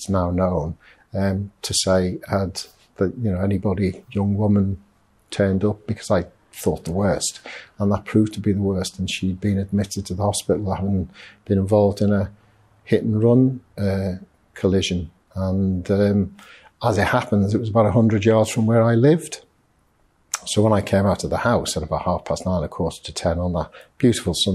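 Sample clock jitter runs throughout: the converter's unsteady timing, well under a microsecond, adds faint hiss on loud, bright passages, seen as a raised high-frequency noise floor only where energy is present.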